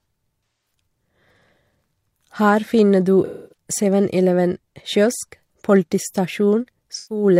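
Speech, with three spots of AAC frame loss with concealment: roughly 0.46 to 0.73 s, 3.25 to 3.57 s, and 6.96 to 7.24 s. In each gap the decoder had no real data and papered over it by rebuilding audio from the last good spectrum, which gives those patches a smeared, phasey texture. The gaps being covered run about 213 ms, 256 ms and 128 ms, so the middle one is the longest.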